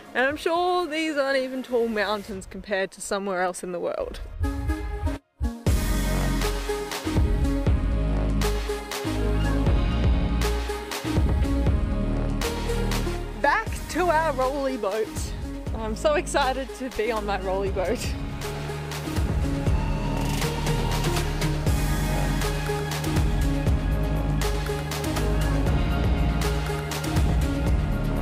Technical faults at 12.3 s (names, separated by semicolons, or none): none